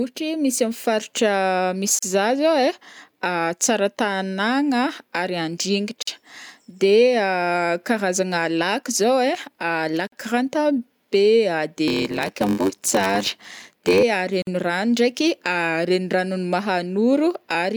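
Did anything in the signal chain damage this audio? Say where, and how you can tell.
Yes. The gap at a join of encoded pieces occurs at 1.99 s (about 36 ms), then at 6.03, 10.07 and 14.42 s (49 ms each), spaced 4 s apart. This is a codec-stage fault: the audio was encoded in 4-second segments and spliced without removing each run's start-up delay and final-frame padding. The speech drops into silence with slightly smeared edges, then resumes exactly where it stopped.

A block size mismatch (padded) runs from 11.87 to 14.03 s, at the driver or buffer stage. A buzz at 93.8 Hz runs through the speech, and delivery slows to 0.861 times normal speed. That fits a stage reading 512-sample blocks while the stage before it supplies only about 441 samples. The shortfall in each block is filled with zeros, and those regular micro-gaps produce the buzz.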